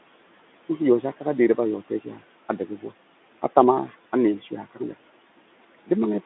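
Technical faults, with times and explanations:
throughout – noise suppressor artifacts: the room noise, about 20 dB below the speech, sinks by about 18 dB between phrases and rises back beneath them, so the background pumps with the speech. Unlike a noise gate, it cuts band by band, frame by frame, not all at once.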